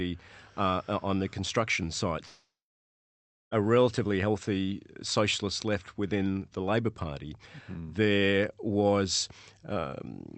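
Speech, carried over a call codec that cuts the top end near 8 kHz. From 2.25 to 3.53 s, after "uh on the construction", the sound stretches into a fading buzz and then about a second of silence. It resumes at "relatively healthy socialist left" with the missing stretch simply gone, most likely a long network dropout. Unlike a short packet loss, the concealment gives up and falls silent.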